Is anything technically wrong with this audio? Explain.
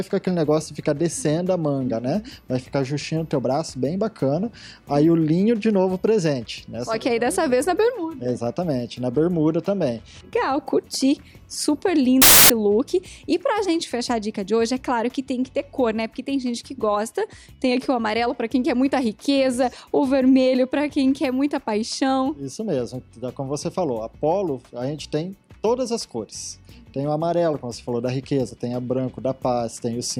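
Yes. From 12.22 to 12.50 s a burst of loud, harsh broadband noise replaces the sound: samples built from the wrong bytes, with bytes misordered so fast-changing low bits dominate each value.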